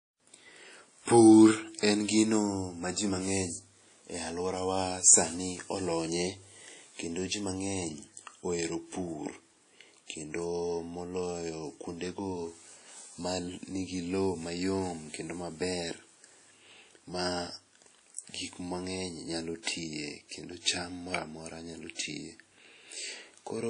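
From start to finish the speech carries plainly audible WMA compression damage, likely from an early WMA encoder running at a low bitrate, around 32 kbps. Long transform blocks smear quantisation noise across tens of milliseconds, so the speech rings and a washy hiss swells and fades with the voice. On a spectrogram, content stops dead at about 10.1 kHz, and weak components above the strongest bands appear as patchy, flickering holes.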